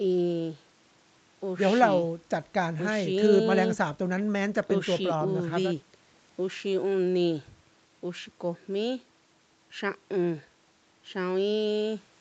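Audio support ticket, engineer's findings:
No faults found. Speech passes through call mic processing and an Opus call path with content up to about 8 kHz, consistent with a 32 kbps wideband setting, and nothing abnormal is heard.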